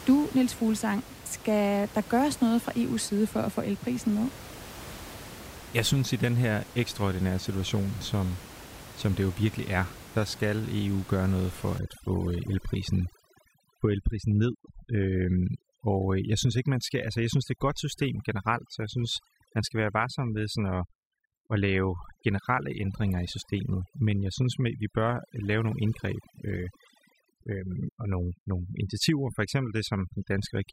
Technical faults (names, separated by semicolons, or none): overdone noise removal